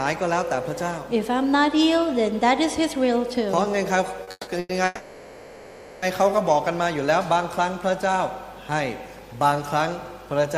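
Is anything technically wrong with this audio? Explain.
Yes. At 4.23 to 4.29 s there is a short stall from a late packet: the jitter buffer emptied, so the last sound is held about 40 ms before continuing intact.

Three call audio freezes follow, at 4.31 to 4.49 s, 4.59 to 4.71 s and 4.85 to 6.04 s. Each holds the sound as a fading buzz, the first two ending in brief silence, with the last lasting about 1.2 s. The likely cause is delayed packets draining the buffer, with playback then resuming where it stopped.

From 6.83 to 7.37 s a jitter buffer slow-down repeats pitch periods to rebuild reserve, adding 44 ms. The sound plays at 93% speed with unchanged pitch.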